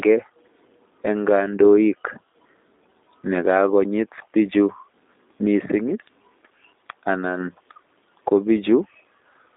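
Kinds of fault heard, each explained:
G.729 codec: speech rebuilt from a vocal-tract filter and sparse pulses, audibly rough and synthetic throughout, band-limited to roughly 250 Hz–3.7 kHz, consistent with 8 kbit/s G.729A.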